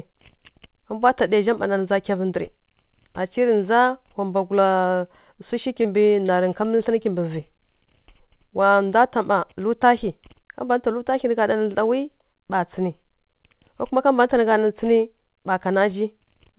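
Right around 5.82 s there's a short concealed packet loss. About 20 ms of audio didn't arrive in time, so the receiver patched the gap by carrying the previous sound forward and then easing back into the real signal. You hear it as a tiny smear or wobble, and whatever fell in that slot is simply gone. The same thing happens again at 6.76 s and 7.02 s, each time with about 20 ms lost and papered over, so the stretch from just before 6 s to about 7 s picks up a slightly wobbly, stuttery texture.

Between those, at 6.26 s, there's a short stall from a late packet. That one isn't a loss. The packet was just late, the jitter buffer ran dry, and the receiver stretched the last sound by about 22 ms until the packet showed up, then carried on from the same spot. Nothing goes missing, but that moment hangs a touch too long with a faint buzzy drag. The whole thing rides over a narrowband call path with nothing above 4 kHz, which sounds consistent with a G.711-style codec.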